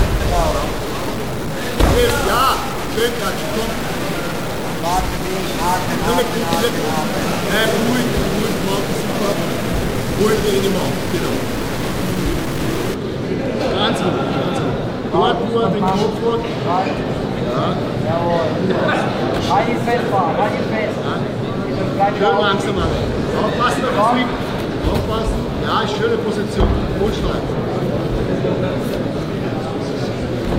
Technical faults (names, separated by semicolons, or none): stuck bit